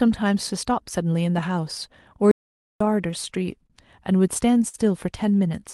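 A short speech recording carried over a call link, whose coding noise and high-frequency limit near 12 kHz fit an Opus-style call codec, with three separate timing faults. The first is an audio dropout to silence from 2.31 s to 2.81 s. For roughly half a second the speech stops dead and the gap is silent, with no room tone, before the sound resumes mid-flow. Whatever was said in that window is gone. The likely cause is that the input was briefly lost, through a dropped device connection, a failed link or an accidental mute, while the recording kept writing silence. Next, a short stall from a late packet occurs at 3.67 to 3.73 s. A packet missed its playout deadline, the jitter buffer ran dry, and the receiver held the last sound for about 31 ms until the data arrived. Nothing is lost, but that moment is drawn out slightly with a slight buzz or dip, and everything after it plays about 31 ms later. 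Finally, repeated stalls (stutter) run from 4.18 s to 4.77 s. The buffer emptied four times in that span as packets kept arriving late, and each time the receiver extended the last sound, concealing 79 ms in total with the longest hold about 53 ms. That is roughly 13% of the stretch. No speech is missing, but the passage drags and stutters audibly.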